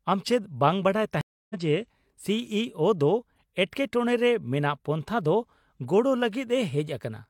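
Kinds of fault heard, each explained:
Stream reconnect: the speech drops out into about 0.29 s of silence from 1.21 s to 1.55 s, then resumes roughly a third of a second further on, skipping material, because the connection broke and the player reconnected with a fresh decoder partway through the stream.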